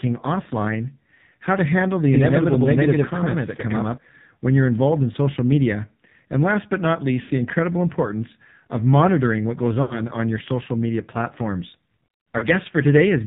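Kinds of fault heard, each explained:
AMR narrowband mobile codec: The speech was carried over a 2G/3G-style link that samples at 8 kHz and rebuilds the voice from a vocal-tract model excited by a few pulses per subframe. The voice is therefore cut off sharply at 4 kHz. Coding damage is heavy: the voice sounds buzzy and synthetic, with a thin, artificial quality that points to one of the codec's lowest-rate modes, around 6 kbps.
Lost AMR speech frames: Some speech frames arrived corrupted and were discarded, so the decoder filled the gaps by repeating its last good pitch and vocal-tract settings at falling gain. At 7.22–7.31 s and 9.82–10.02 s, roughly 80 ms of real audio is missing each time, and the voice smears into a drawn-out, warbling tail that sags toward silence. A shorter loss of about 40 ms at 12.38–12.46 s causes a brief dip and warble.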